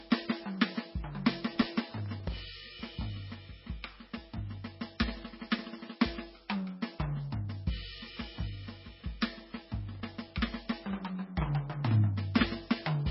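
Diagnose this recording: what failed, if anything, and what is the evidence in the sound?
Codec stage. Across the whole music clip the top end is gone: nothing sounds above 5.6 kHz, and the remaining highs have the swirly, smeared texture of heavy MP3 coding. This is likely low-bitrate audio saved at a high bitrate. An early encode, on the order of 18 kbit/s, discarded that content, and a later high-rate MP3 encode, which fits about 192 kbit/s, could not restore it. On a spectrogram, energy stops at a hard, flat ceiling near 5.6 kHz for the full length, with patchy, blocky detail just below it.

Driver or buffer stage. Processor overload crackle appears from 1.56 to 2.37 s and again from 9.95 to 10.32 s as a gritty tearing laid over the music. The audio thread repeatedly missed its deadlines, which points to a very short buffer of roughly a millisecond and a half. Each missed buffer was replaced by silence, around a few dozen dropouts in the first burst and a couple of dozen in the second. 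The waveform shows dense rows of tiny flat gaps with hard edges, and the spectrogram shows vertical broadband streaks.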